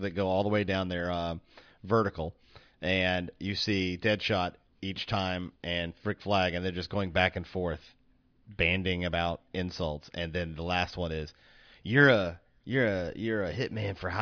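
No technical faults can be heard anywhere in this recording.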